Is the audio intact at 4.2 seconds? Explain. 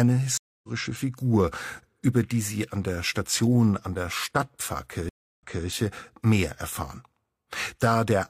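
Yes, at 4.2 seconds the audio plays through intact, with no dropout, click, distortion or other fault at that moment.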